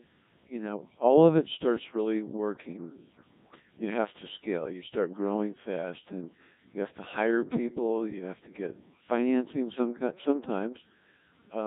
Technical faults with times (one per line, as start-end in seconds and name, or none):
0.00-11.67 Codec 2 vocoder